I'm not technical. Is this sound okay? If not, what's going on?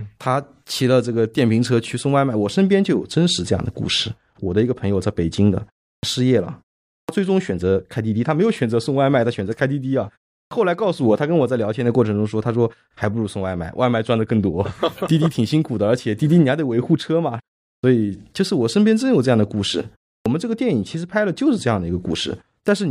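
No. There is a clipped start after a pause at 5.95, 7.01, 10.44, 17.76 and 20.18 s. The playback device dozes during short silences and wakes late. Each time, the first 70 to 80 ms of speech is cut off.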